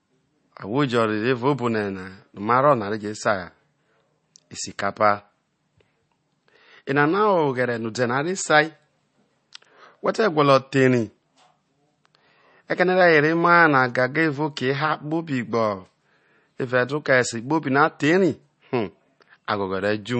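From start to finish the speech has nothing above about 8.3 kHz, and the remaining band has a watery, swirling quality, with s sounds turning metallic and consonant onsets smeared. This is likely MP3 compression at a low bitrate, consistent with roughly 32 kbps. Short of bits, the encoder cut the treble at a fixed point and discarded weak frequency lines, which flicker on and off from frame to frame.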